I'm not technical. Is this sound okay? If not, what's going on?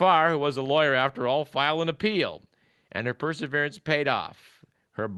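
Yes, nothing in this recording points to a technical problem; the signal stays steady and intact all the way through.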